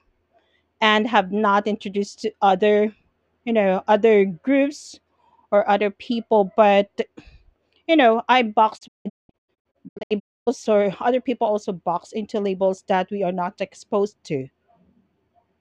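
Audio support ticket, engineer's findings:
Speech cuts out in several short holes with quick 20 ms fades, 8.77 to 10.49 s, between "you know I" and "or other people also". About 1.03 s of audio gone over a 1.68 s stretch, longest hole 264 ms. Digital broadcast dropout: the receiver lost frames or failed checksums, muted, then resumed. Missing content not recoverable.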